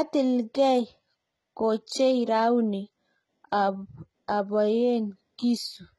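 From start to finish, the speech has a synthetic, metallic top end. Nothing is present above 11.8 kHz. Sibilants sound gritty and lispy. Heavy damage like this is likely HE-AAC compression at a low bitrate, around 16 kbps. It rebuilds the treble by copying lower bands upward.

At 1.87 s, a short hiss comes just before a sharp attack, which sounds smeared. This is pre-echo. Coding noise meant for the louder attack spreads about 12 ms into the quiet moment ahead of it.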